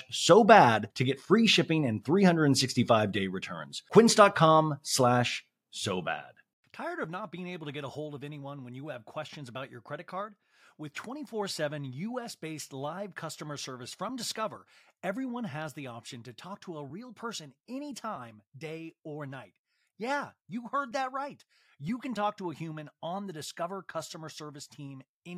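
Listening to this speech recording, nothing technically amiss stood out at any point.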